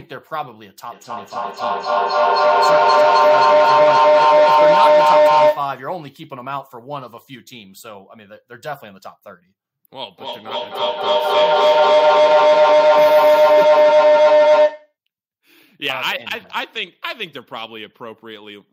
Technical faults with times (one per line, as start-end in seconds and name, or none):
0.91-5.80 feedback howl
10.09-14.95 feedback howl